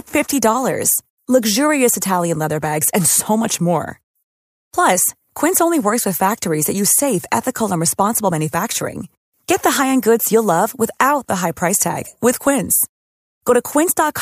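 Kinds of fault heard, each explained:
No faults detected in the speech; nothing to list.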